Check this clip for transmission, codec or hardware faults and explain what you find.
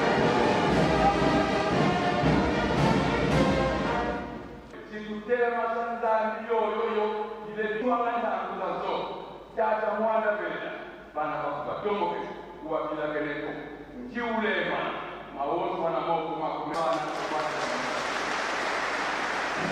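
Two kinds of fault are present: one skip ahead and two stretches of jitter buffer speed-up.

At 7.81 s the audio jumps forward abruptly with no gap, and roughly 0.4 s of material is simply gone, with the sound before and after the jump joined almost directly. This is a skip ahead: a stretch of audio was discarded, either lost in transit or thrown away by an overflowing jitter buffer, while later audio was already queued. Playback therefore resumed from the newer material.

From 9.04 to 11.14 s the audio runs at about 107% speed, and from 11.61 to 12.42 s at about 105%, with the pitch unchanged. Both stretches sound hurried. This is jitter buffer speed-up: the buffer was holding more audio than its target, so the receiver repeatedly cut out short pieces one or a few pitch periods long to reduce the delay. In total it removed around 150 ms in the first stretch and around 50 ms in the second.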